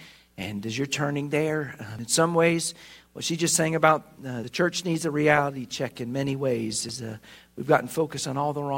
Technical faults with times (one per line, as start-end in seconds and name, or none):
1.99 audio missing between chunks
4.44 audio missing between chunks
6.89 audio missing between chunks